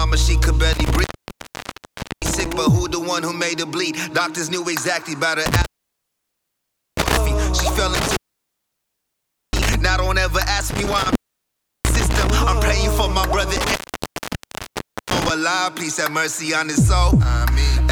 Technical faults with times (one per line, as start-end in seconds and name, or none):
0.73-2.53 intermittent contact
5.46-7.17 intermittent contact
7.95-9.75 intermittent contact
10.70-12.30 intermittent contact
13.56-15.30 intermittent contact